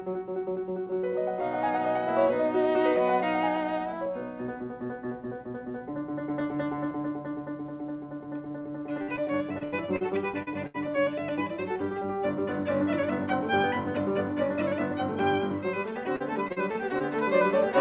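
Music comes through a call path that carries nothing above 4 kHz, which points to a G.711 mu-law codec at 64 kbps.

At 8.62 s there is a short concealed packet loss. About 20 ms of audio never arrived in time. The receiver extended the last sound to cover the hole. It sounds like a brief smear.

From 9.02 to 10.03 s comes repeated packet loss, heard as robotic sound. Six gaps fall close together, the longest 74 ms. About a fifth of that stretch is patched. The music turns choppy, with pieces missing.

From 10.43 to 10.49 s another short concealed packet loss fills 40 ms. It is a quick wobble.

From 10.67 to 10.76 s there is a burst of packet loss. About 80 ms went missing in one run. The last sound is held and turned down as the gap goes on. Then the music jumps ahead.

From 16.16 to 17.02 s repeated packet loss returns. Five gaps hit, the longest 41 ms, covering about 16 percent of the span. 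The music sounds robotic and broken again.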